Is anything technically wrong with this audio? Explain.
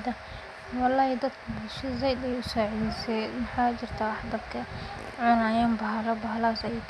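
No, no technical faults.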